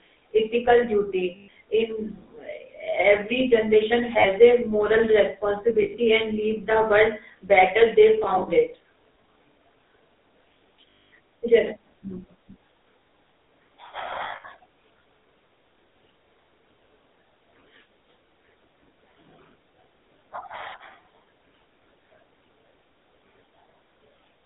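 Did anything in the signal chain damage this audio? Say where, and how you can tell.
Yes. Throughout the speech there is a buzzy, gravelly roughness, and the band is confined to roughly 250 Hz to 3.7 kHz, with nothing above. That is the GSM full-rate codec, consistent with 13 kbps full-rate GSM. The codec models the vocal tract and drives that filter with regularly spaced pulses, keeping only a thinned excitation. The crude pulse train produces the grit, and the narrow line band strips away the top end.

Lost GSM frames occur at six points in the network stage. Brief rough, metallic holds are heard at 1.36–1.48 s (120 ms), 4.18–4.26 s (60 ms), 5.82–5.95 s (120 ms), 8.24–8.49 s and 14.24–14.45 s, where the holds are scattered with runs of around 70 ms, and 10.93–11.11 s (220 ms). Each time, the decoder repeats the last good frame's settings, so the sound is held as a rough, metallic ring.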